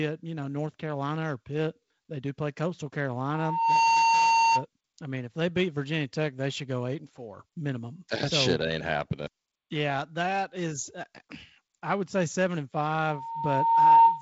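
At 3.28 s a loudspeaker feedback squeal kicks in: the mic is catching its own speaker, the loop gain at 915 Hz tops one, and that tone swells over about half a second to well above the speech until 4.65 s. It returns at 13.05 s, building for about a second, louder still, to the end.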